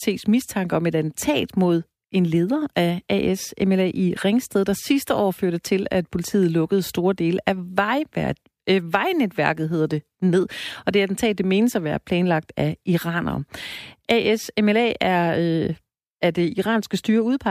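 The speech signal stays steady and continuous throughout, with no dropouts, distortion, noise bursts or timing problems to be heard anywhere in the recording.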